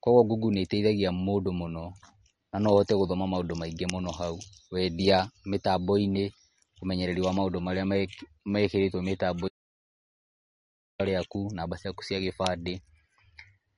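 From the start, the speech carries plainly audible MP3 compression. Nothing sounds above 10.6 kHz, a hard treble ceiling set by the encoder, and the thin, watery swirl on sibilants, with metallic chirps as weak frequency lines flicker in and out between frames, is likely the result of a starved bitrate, which fits roughly 40 kbps. Simple low-pass filtering would dull the top end without that frame-to-frame warble.

At 9.48 s the sound cuts out abruptly and returns at 11.00 s, an audio dropout to silence lasting about 1.51 s. The gap is silent with no room tone or codec hiss left underneath, which sets it apart from a quiet pause or a noise gate closing. That points to the input likely being lost while the recording carried on writing silence. Whatever was spoken in that stretch is gone.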